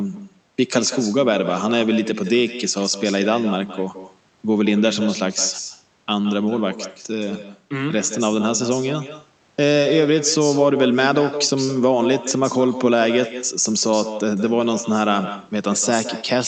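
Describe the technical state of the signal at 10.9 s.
At 10.9 s, as throughout, an echo with no canceller: the far end's speaker leaks into its microphone, returning the speech roughly 150 ms later, about 10 dB quieter and thinner.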